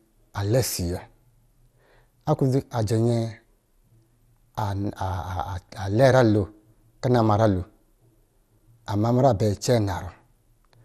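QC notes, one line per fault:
Throughout: MP2 compression, likely from a low-rate Layer II encode. The speech sounds dull and gurgly, with a granular edge. Too few bits, around what you'd expect near 80 kbps, means upper sub-bands keep dropping out and flickering back, and what survives is coarsely quantised.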